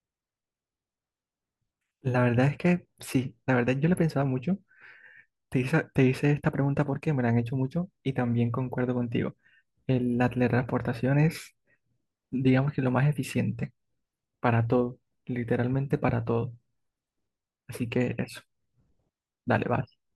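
Running through the whole speech recording is a faint hiss and roughness that rises on loud and bright syllables and disappears in pauses. This is sample clock jitter: a timing wobble of around a microsecond misplaces samples, leaving error about 50 dB below the signal.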